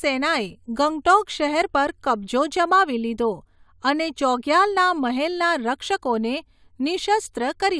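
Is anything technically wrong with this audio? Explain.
No, nothing is technically wrong with this audio.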